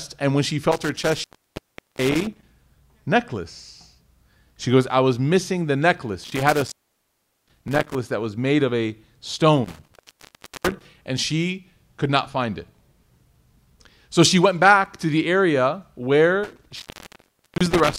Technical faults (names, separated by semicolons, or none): intermittent contact